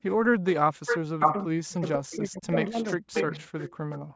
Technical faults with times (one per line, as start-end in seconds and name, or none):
0.00-0.81 background gated by the echo canceller
0.45-0.49 echo leak
0.86-1.45 echo leak
1.09-3.32 speech suppressed in double talk
2.13-2.18 echo leak
2.54-3.98 echo leak
3.70-4.15 background gated by the echo canceller